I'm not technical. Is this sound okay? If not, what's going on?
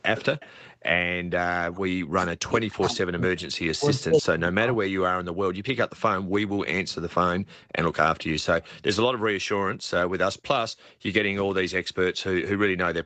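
No, there are a few call problems in this speech clip.

First, background gated by the echo canceller. From 0.53 to 0.83 s, and again on and off between 9.78 and 11.95 s (about half a second in total), the room sound drops away almost to silence and then comes back. That's the call's echo canceller clamping the microphone right down because it thought the loudspeaker was playing something it needed to keep out.

Second, speech suppressed in double talk. Between 1.64 and 4.87 s the voice sinks sharply or cuts out in bits, adding up to around two seconds. This is likely because both ends were talking at once, and the echo canceller couldn't tell the real talker apart from the loudspeaker's echo, so it turned everything down together.

Third, echo leak. From 6.0 to 8.83 s, and again from 10.37 to 11.54 s, there's a faint delayed copy of the voice trailing about 0.45 seconds behind, a bit quieter the second time. 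Someone is likely on a speakerphone, and their echo canceller let some of what came out of their speaker slip back into their microphone, so it got sent back down the line.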